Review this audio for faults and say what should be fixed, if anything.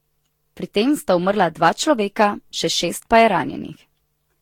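Generation loss runs through the whole speech clip, from start to finish. The swirling, smeared and hollow quality is beyond what a single Vorbis pass near 70 kbit/s would leave, and consonant attacks blur. The likely cause is about seven successive decode-and-re-encode passes. Each pass quantised the signal on a shifted frame grid, so noise and spectral gaps stacked up, and nothing remains above 18.1 kHz. Prevent it by editing from a lossless master and encoding only once, at the end.

Hard clipping occurs from 2.21 to 2.24 s, a burst of about 30 ms where the signal was pushed roughly 2 dB past what a stage could pass. The peaks were sliced flat, and those squared-off tops add high harmonics that come through as a brief crackle rather than a sustained fuzz, since the overload is small and short. Prevent it by lowering gain before that stage so peaks keep a few decibels of headroom.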